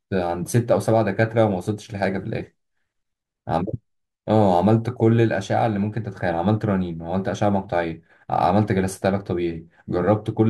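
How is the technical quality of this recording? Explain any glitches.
Sample clock jitter is present throughout the speech, so the recording is not clean. A faint hiss and grainy roughness ride on the voice, thickening on louder passages and on bright consonants and fading to nothing in the pauses. The converter's clock wobbles by roughly a microsecond and a half, so each sample is taken slightly off time. Where the waveform changes fastest, that timing slip becomes the largest amplitude error, leaving noise about 45 dB below the speech.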